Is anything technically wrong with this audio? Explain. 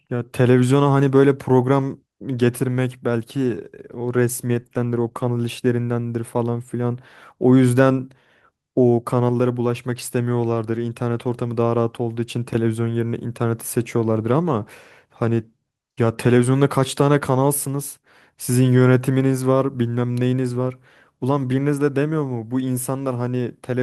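Yes. From 3.18 to 5.83 s there is a call bitrate drop. The speech turns coarse and rough, fitting an encoder pushed from about 32 to 18 kbps.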